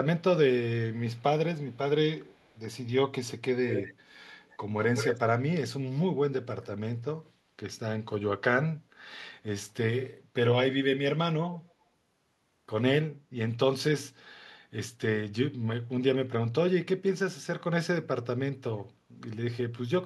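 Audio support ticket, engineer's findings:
Delayed copies of the speech trailing behind it: 1.16–1.23 s, 1.71–1.78 s, 2.22–2.60 s (very faint, 261 ms lag); 3.69–3.94 s, 4.43–4.57 s, 4.79–5.19 s (181 ms lag, first and last almost as loud as the speech itself); 11.53–11.64 s (faint, 224 ms lag). Echo leak, likely from the far end's loudspeaker playback reaching its microphone and getting past an echo canceller that didn't fully subtract it. The changing lag points to the echo path shifting over the call.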